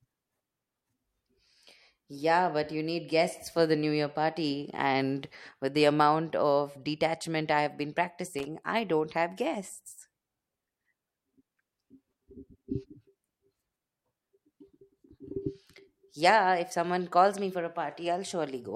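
A worn contact in the signal path briefly made and broke, causing loose connector crackle from 8.39 to 8.45 s: a short scratchy burst between "detachment I have been" and "I don't have guests".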